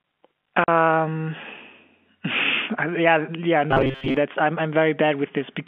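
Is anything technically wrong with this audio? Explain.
Yes. There are two faults in this speech.

From 0.64 to 0.68 s there is packet loss filled with silence. A 40 ms hole opens, which fits two lost 20 ms packets. The receiver played nothing in their place. The speech drops out abruptly.

From 3.71 to 4.17 s there is robotic sound from repeated short buffers. The likely cause is audio arriving too slowly, so a segment of about 7.5 ms was replayed over and over, covering most of this stretch. That loop forces a buzz at 134 Hz. The speech becomes a rigid, metallic drone that still roughly follows the syllables. The telephone-band G.711 coding itself is working normally.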